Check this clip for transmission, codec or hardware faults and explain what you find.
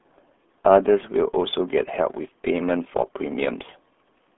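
One fault runs through the whole clip: the speech carries RealAudio 14.4 codec damage from start to finish. The low-rate RealAudio 1 speech coder discards everything above about 3.8 kHz and squeezes the signal into roughly 200 Hz to 3.5 kHz, with heavy coding loss that fits an 8 kbit/s stream. The result sounds muffled and gargly. A spectrogram shows a hard ceiling near 3.8 kHz, blank above it, with smeared, blotchy harmonics below.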